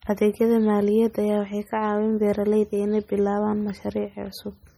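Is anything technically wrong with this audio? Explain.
Yes. Heavy MP3 compression runs through the whole speech clip, likely from encoding at a very low bitrate; the damage level fits something around 32 kbps. With so few bits, the encoder chops off the treble and zeroes out quieter frequency lines, which flicker on and off from frame to frame. You hear that as a watery, swirly texture, chirpy metallic edges on s sounds, and consonant onsets that come out smeared rather than crisp.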